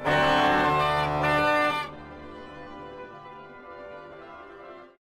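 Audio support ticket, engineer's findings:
No technical faults found in this everyday-sound recording. Nothing to escalate; ticket can close.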